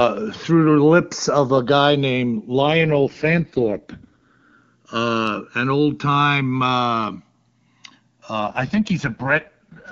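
Throughout the clip the two channels drift apart. They come from devices whose clocks don't agree, with an error on the order of 150 ppm, so the delay between them keeps sliding until it reaches roughly a millisecond and a half by the end. Summed to mono, that moving offset sweeps comb-filter notches slowly through the spectrum, and the speech takes on a gradual flanging, hollow swirl.

At 2.62 s, right after "of a guy named", there is an AMR rate drop. The link degrades and the codec is pushed from its clean top mode down to its lowest. The sound fits a fall from 23.85 to 6.6 kbit/s. Bandwidth holds and nothing drops out, but the speech turns rough, raspy and synthetic until 4.62 s, where it recovers just before "uh an old time".

A second AMR rate drop starts at 8.40 s and runs to the end of the clip at 9.91 s. It has the same rough, synthetic texture, consistent with the same fall to the 6.6 kbit/s mode, and the speech does not return to the clearer AMR-WB quality heard between the two drops.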